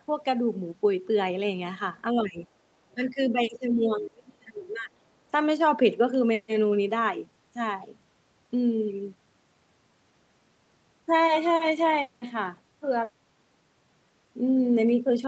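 Speech clip with two level drops, 2.13 to 2.41 s (about 15 dB) and 2.94 to 4.9 s (about 25 dB), heard as the talker sinking under while far-end audio plays; likely speech suppressed in double talk, with the echo canceller attenuating near-end speech alongside the echo.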